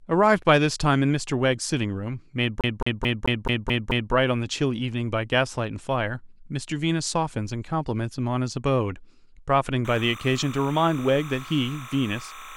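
From 2.61 to 4.13 s the speech hits a CD stuck on one turn. A scratch keeps knocking the laser back one track, so the same 0.22 s fragment plays seven times in a row, each pass cut by a brief mute at the jump. It sounds like a fast, mechanical stutter. On a waveform the identical 217 ms shape repeats like tiles, with a thin gap or step at every seam.

From 9.85 s to the end of the clip there is timecode bleed. Linear timecode from a neighbouring line has leaked into the audio, its square wave flipping between tones near 1 and 2 kHz at a rate that fits 29.97-frame code. It sits roughly 15 dB below the speech as a steady chirping warble. A spectrogram shows two bright horizontal bands with faint odd harmonics stacked above them, running unbroken beneath the speech.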